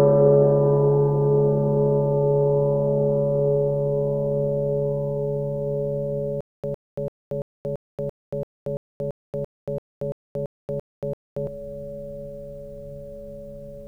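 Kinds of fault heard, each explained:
Stutter with silent gaps: From 6.41 to 11.47 s the music stops advancing, and a single burst of about 107 ms repeats fifteen times, each followed by about 231 ms of dead silence, giving a steady cycle of about 338 ms. This is likely a stalled player or stream replaying its last buffered fragment at every retry before running dry, so the passage meant for those seconds is lost. A waveform shows identical short blocks separated by flat silent gaps. A spectrogram shows matching vertical slices alternating with fully blank columns at an even spacing.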